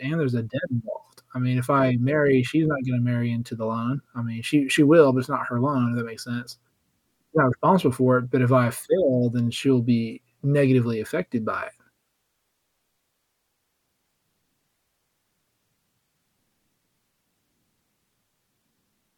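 Nothing in this recording jumps out as a technical fault, so there's no moment worth flagging.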